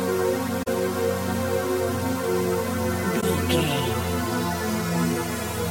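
AAC frame loss with muting occurs twice: from 0.62 to 0.68 s, a gap of about 43 ms that fits two lost frames, and from 3.21 to 3.24 s, about 21 ms, consistent with one frame. The decoder zeroed the missing spectrum, and the overlapping transform windows taper the sound down and back up over roughly a frame. That fade, rather than a hard edge, separates these soft holes from an abrupt sample-level dropout.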